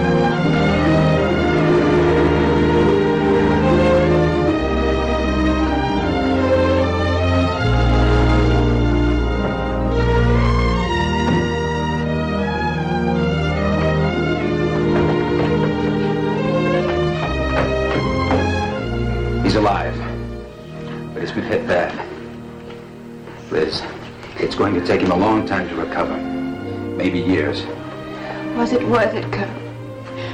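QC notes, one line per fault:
Throughout, hard clipping: the sound is driven about 8 dB past what the signal path can pass, so roughly one sample in twenty-five has its peak sliced flat. Those squared-off tops throw harmonics high up the spectrum, heard as a harsh fuzz on loud passages.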